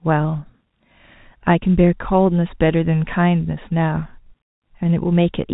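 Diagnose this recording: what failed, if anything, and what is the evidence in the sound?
Nothing in the recording points to a failure at any stage of the chain. What can be heard is a working G.711 telephone path, with the speech limited to below 4 kHz and, at most, a faint level-following quantisation hiss.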